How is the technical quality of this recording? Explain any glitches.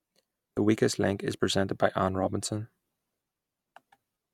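The recording has one brief glitch.

Damaged data in a compressed stream, at 0.56 s: a short stretch of the encoded speech was corrupted, so the decoder misread those bytes and lost sync while hunting for the next valid frame header. The result is a quick glitch lasting about 14 milliseconds.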